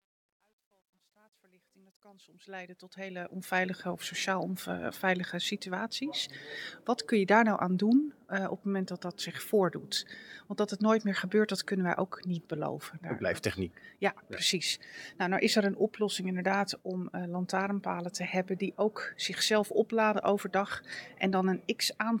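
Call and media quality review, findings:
Truncation distortion on the fade-in, 0.0–3.74 s, worst 0.0–2.52 s. Quiet start sounds gritty. Probably an undithered fade/gain stage; the stepping fits 12-bit resolution.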